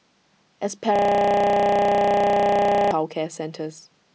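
Speech with a system hang loop from 0.96 to 2.91 s: a 32 ms buffer repeats 61 times, giving a 31.2 Hz buzz, which fits a 512-sample buffer. The waveform shows one identical segment tiling, and the spectrogram shows even vertical stripes.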